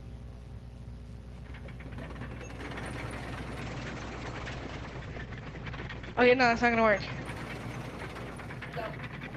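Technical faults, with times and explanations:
3.63–7.31 s, call bitrate drop: the call's bandwidth estimate fell, so the encoder was told to spend far fewer bits, which fits a fall from around 32 kbps to around 10 kbps, with the lowest rate held for about 2.7 s. With so few bits, the coding turns coarse and rough, and the audio bandwidth narrows from 12 kHz to 8 kHz, so the sound dulls and loses its top end until the rate recovers.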